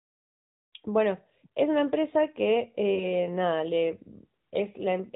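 From about 2.94 s to 3.06 s the speech dips and warbles briefly, then steadies. This is lost AMR speech frames, and the short disturbance fits a single missing 20 ms frame. Radio errors corrupted that frame, so the AMR narrowband decoder filled the gap by repeating the last good pitch and vocal tract settings at reduced gain. The patch and the return to normal decoding take the sound through this short wobble.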